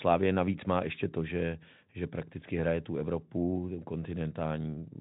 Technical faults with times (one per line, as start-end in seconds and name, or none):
none